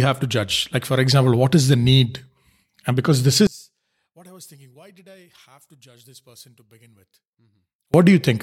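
From 3.47 to 7.94 s the speech drops about 30 dB, collapsing to a faint residue, which sounds likely like one channel inverted cancelling on mono summing.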